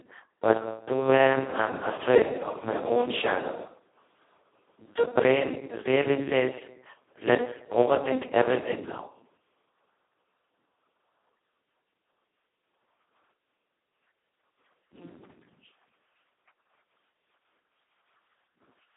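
Across the whole recording the speech has passed through the Speex codec at its very lowest quality setting, which fits a rate of about 2 kbps. With so few bits for the excitation, Speex is working almost as a vocoder. The voice comes out hoarse, buzzy and robotic, with heavy smearing of detail. The band is telephone-narrow, roughly 300 Hz to 3.6 kHz, and nothing at all remains above 3.8 kHz, leaving it thin and muffled.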